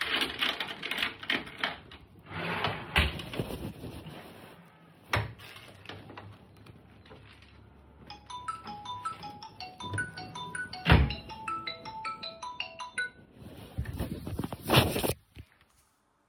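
No technical faults can be heard anywhere here.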